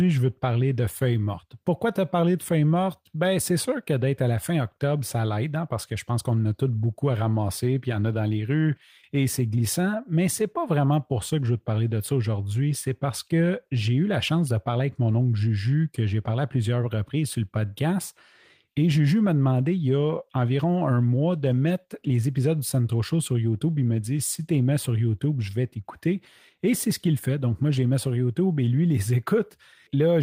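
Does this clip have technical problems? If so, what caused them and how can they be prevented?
No, no technical faults here.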